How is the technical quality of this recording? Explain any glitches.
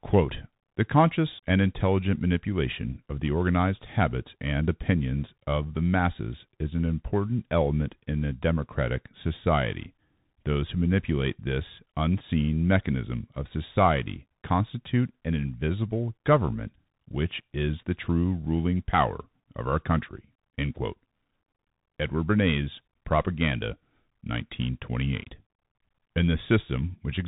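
Technical quality is poor throughout. The speech sounds thin, boxed-in and scratchy from start to finish, with a grainy hiss riding under it and sibilants breaking up. That is the Bluetooth CVSD headset codec: nothing above about 3.8 kHz survives, and its one-bit up-or-down steps, which fit a 64 kbps link, cannot keep up with loud high content. The result is slope distortion and granular noise.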